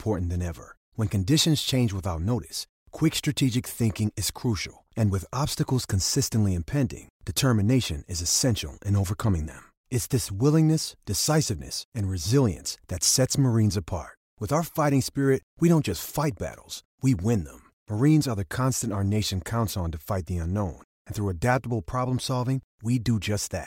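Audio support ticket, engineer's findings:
No faults found in the speech recording for this ticket.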